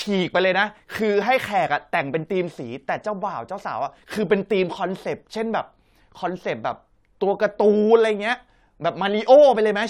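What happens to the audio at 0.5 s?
Nothing goes wrong at 0.5 s; the speech plays through cleanly there with no dropout, click or distortion.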